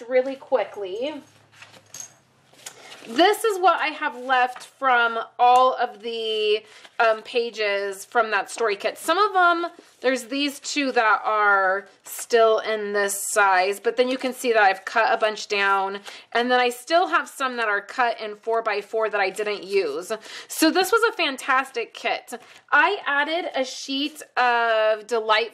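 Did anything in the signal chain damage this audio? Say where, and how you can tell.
No, nothing in the chain left an audible mark on this audio at any stage.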